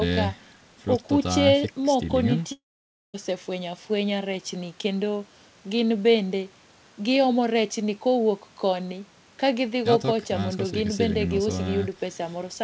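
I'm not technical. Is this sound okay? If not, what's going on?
No. From 2.52 to 3.16 seconds the speech cuts out: a short buzzy trace of the last sound fades away, then there is about half a second of near silence before talking resumes. The missing stretch, roughly 0.6 seconds, is simply gone, not delayed. That points to a long network dropout as the likely cause. A brief packet-loss blip would be a tiny click or warble, and a natural pause wouldn't start with that fading buzz.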